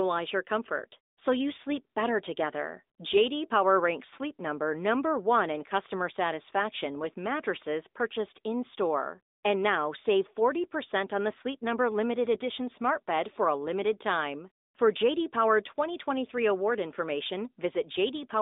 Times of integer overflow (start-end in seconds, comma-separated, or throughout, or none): none